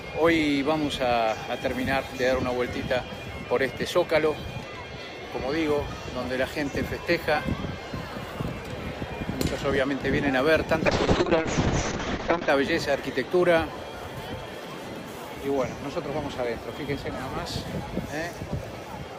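From 10.87 s to 12.55 s the sound turns rough and muffled: the top end vanishes above about 8 kHz, and what remains has a coarse, watery grain for about 1.6 s before the full, bright sound returns. This is a call bitrate drop. The call's bandwidth estimate fell, so the encoder coded far more coarsely and narrowed its audio band from the full 20 kHz. The degradation points to a drop from roughly 48 kbps to around 6 kbps.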